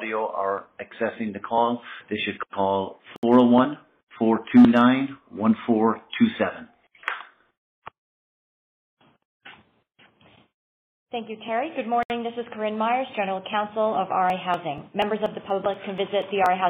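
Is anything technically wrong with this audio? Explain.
Yes, there are two kinds of fault.

A gap at a join of encoded pieces opens at 3.16 to 3.23 s (67 ms) and at 12.03 to 12.10 s (69 ms). Separately encoded sections were butted together untrimmed, so encoder start-up delay and end padding survive as silences with smeared edges before the sound resumes where it left off.

Periodic USB or driver dropouts run from 14.3 to 16.46 s, recurring every 0.24 s, about ten in all. A background task stalls the bus or driver at a fixed interval, and each time roughly 10 ms of audio is skipped outright, giving evenly spaced ticks in the sound.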